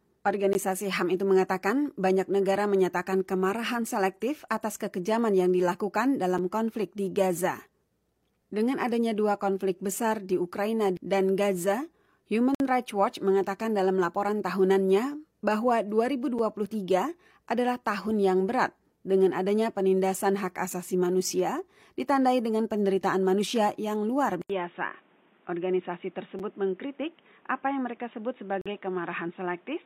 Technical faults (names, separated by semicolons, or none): gap between stream segments; gap between chunks; input switched to a poorer device